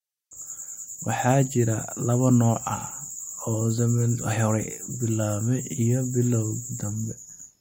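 From 3.72 s to the end, a resampler restarted on every block leaves a 50 Hz buzz, one tick per 20 ms block edge, present only with signal, unlike steady mains hum.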